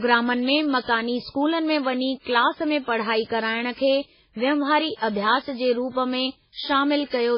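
Likely MP3 compression throughout: nothing sounds above 5.3 kHz, and the speech turns heavily watery and swirly, pointing to a starved bitrate near 16 kbps.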